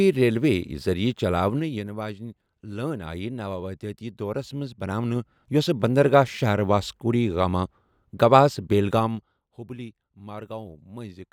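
From 1.45 to 1.88 s, 4.35 to 5.80 s (before "بندرگاہ شَہر واسکو ڈی") and 8.88 to 9.56 s (after "واسکو ڈی گاما گوہس"), zipper noise appears. The speech level moves in 2 dB jumps, down about 10 dB, up about 10 dB, then down about 15 dB. Each jump ticks audibly, roughly ten, three and fifteen times a second. These steps are unsmoothed.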